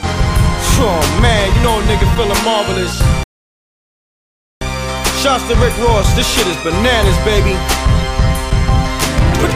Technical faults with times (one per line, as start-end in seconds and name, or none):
3.23-4.61 playback stall